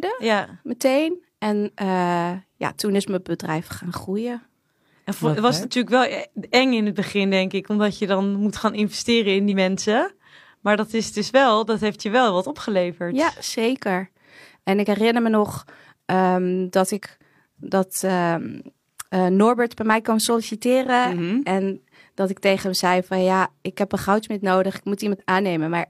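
At 1.63, 9.48, 14.82 and 16.95 s the speech is broken by short bursts of damaged data in a compressed stream, each lasting about 45 to 65 ms. Corrupted bytes in the encoded frames make the decoder misread them and lose sync until it finds a valid frame header. The result is a chirp, squawk, click or short hole. A network dropout would instead leave a silent or smoothed gap.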